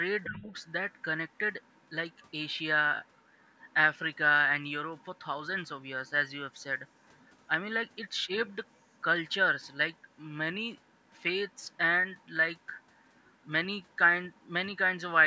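A speech recording from a call, carrying two faults. The first is the other side's voice leaking through. A second voice sits faintly under the talker, about 35 dB down, and slightly lower, near 40 dB down, in the last stretch. It is heard from 0.23 to 4.17 s, in a brief scrap at 4.99 to 5.05 s, then 6.07 to 7.96 s, 8.66 to 10.13 s and 10.88 to 14.41 s. The likely cause is a loudspeaker on the talker's device. The echo canceller did not fully strip that playback from the microphone. The second fault is speech suppressed in double talk. From 0.29 to 0.45 s, just as the leaked voice begins, the talker's level dips by about 15 dB for roughly 150 ms. Both sides were likely sounding together there. The canceller probably could not tell the near voice from the echo, so it pulled everything down. The band stops at 8 kHz, consistent with the call's microphone path.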